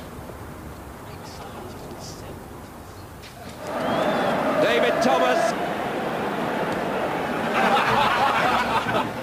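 No dropouts, clipping, noise bursts, timing slips or other transport or processing faults turn up anywhere in the clip.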